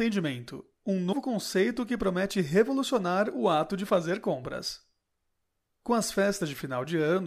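At 1.09 to 1.13 s the speech is broken by a brief burst of damaged data in a compressed stream, lasting about 44 ms. Some of the encoded bytes there were corrupted, so the decoder misread those frames, lost its place and had to hunt for the next valid frame header before resuming. It comes through as a short chirp, squawk, click or brief hole in the sound.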